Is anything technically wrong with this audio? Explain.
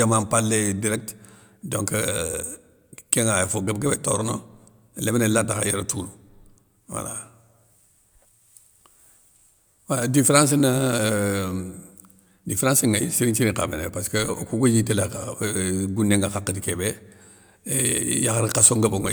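No, nothing stood out as technically wrong on listening to this speech recording.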